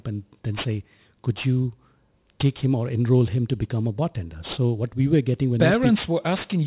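Speech throughout shows aliasing: sibilants sound gritty and metallic, with energy folded back below the 4 kHz band edge at roughly 20 dB under the signal, pointing to unfiltered downsampling to about 8 kHz.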